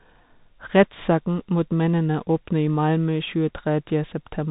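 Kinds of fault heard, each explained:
Bluetooth CVSD headset codec: one-bit up-or-down coding with an adaptive step, fitting a 64 kbps stream; speech cuts off at 3.8 kHz, with scratchy s sounds and grainy hiss.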